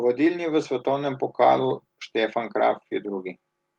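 Speech, with automatic gain rising from 0.16 to 1.28 s, lifting the level by about 4 dB. The background noise swells along with the voice, so it isn't the talker moving closer.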